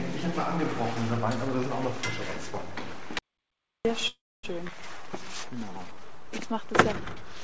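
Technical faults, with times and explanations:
Throughout: DC offset. The waveform sits shifted off zero by a constant, wasting headroom and leaving steady energy at the very bottom of the spectrum, though nothing audible.
3.19–3.85 s: audio dropout to silence. The input was likely lost, so about 660 ms of sound vanishes into silence with no room tone, then resumes mid-flow.
4.08–4.45 s: call audio freeze. Packets likely stalled and the jitter buffer ran dry; a fading buzz fills about 350 ms, mostly dead silence, before the sound picks up where it stopped.
4.67 s: skip ahead. A stretch of queued audio was dropped, so roughly 200 ms of sound is missing and the two sides join almost directly.
4.97–6.14 s: jitter buffer slow-down. The receiver repeated pitch periods to rebuild its reserve, adding 168 ms; sound runs at 86% speed, drawn out but at unchanged pitch, through a call path with nothing above 8 kHz.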